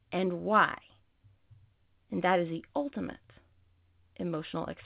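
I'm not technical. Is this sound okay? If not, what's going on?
Yes, the speech came through an ordinary phone-style call connection that is working as it should, and like any standard phone line it carries nothing above about 4 kHz, so it has the familiar, slightly narrow sound of a normal phone call rather than any fault.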